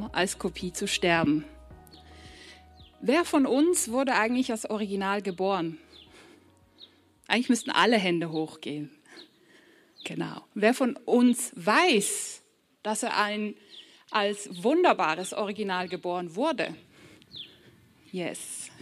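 No technical faults can be heard anywhere in the recording.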